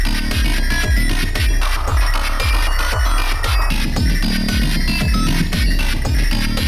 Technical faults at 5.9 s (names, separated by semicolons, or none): none